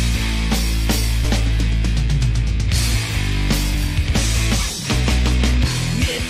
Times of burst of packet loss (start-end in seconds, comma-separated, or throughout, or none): none